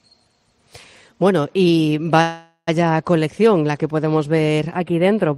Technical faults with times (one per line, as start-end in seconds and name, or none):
2.21-2.69 call audio freeze
4.75-5.37 channel delay (comb filtering)